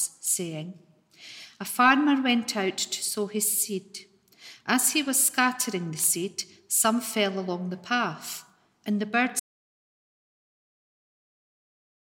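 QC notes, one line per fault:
9.40 s to end: audio dropout to silence. The sound cuts off abruptly mid-flow and never returns, leaving about 2.7 s of silence with no room tone or noise floor beneath it. This is likely the input being lost, through a disconnected source, a failed link or an unintended mute, while recording continued and wrote silence. On the waveform the trace collapses to a flat line; the spectrogram goes uniformly black across all frequencies to the final frame.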